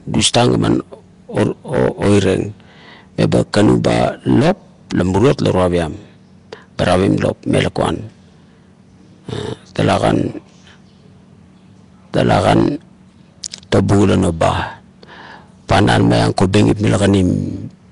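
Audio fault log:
throughout, Nellymoser compression: rough, hissy, smeared speech, likely from Nellymoser Asao coding near 44 kbps; the spectrogram shows noise-filled, blocky bands and nothing above 10.6 kHz.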